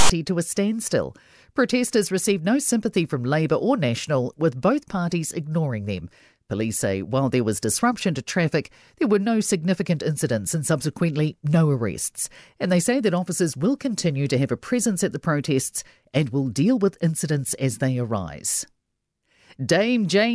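A loud, hard-edged rasp of static from 0 to 0.10 s opens this speech recording, just before "to a standstill". It is file tags played as audio: a block of text tags was decoded as samples, giving a lopsided, DC-offset burst.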